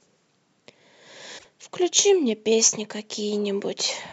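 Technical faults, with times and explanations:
1.37 to 1.45 s, broken MP3 bit reservoir: likely lost frames left the next ones borrowing the wrong bytes, so speech skips ahead through a brief corrupted stretch.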